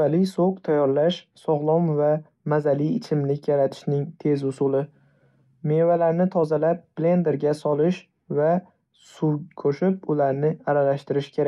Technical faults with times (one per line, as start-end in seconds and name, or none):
none